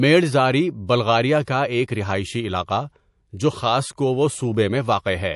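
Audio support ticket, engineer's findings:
MP3 compression, whole clip: watery, swirly speech with smeared edges and dull treble. Likely a heavily squeezed MP3 encode. The damage fits a low bitrate around 48 kbps, with the encoder cutting treble and dropping weak frequency lines frame to frame.

Pre-echo at 0.87–0.89 s (22 ms, about 12 dB noise rise) and 1.45–1.47 s (25 ms, about 17 dB): short hiss before sharp attacks, which sound soft. Codec noise smeared across a long ~48 ms block, as if short blocks never switched in.

Wi-Fi interference from 3.54 s to the end: faint steady ticking about ten times a second, well below the speech. That's a 102.4 ms beacon period from a nearby radio getting rectified into the audio circuit.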